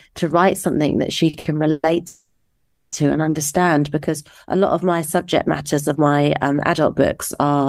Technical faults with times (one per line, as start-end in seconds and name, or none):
1.29-1.47 short stall from a late packet
1.71-2.94 call audio freeze